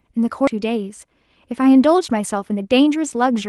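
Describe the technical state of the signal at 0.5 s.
Just before 0.5 s, between 0.47 and 0.49 s, there is a skip ahead. A stretch of audio that should have played there never reached playback, or the jitter buffer threw it out when it overflowed while later audio was already queued. Roughly 0.7 s of speech is missing, and nothing fills the gap. The two sides are butted almost directly together, so the speech lurches forward abruptly, losing syllables or words without any audible silence.

Right after that, from 0.56 to 1.06 s, comes a jitter buffer speed-up. The receiver was holding more audio than its target delay, so it trimmed short pitch-period-sized slices repeatedly to catch up, about 50 ms in total. Over that half second the speech runs at roughly 109% speed with its pitch unchanged, sounding rushed and clipped in rhythm.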